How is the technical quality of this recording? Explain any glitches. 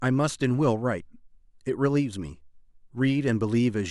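Nothing in the recording stood out as a technical problem on listening.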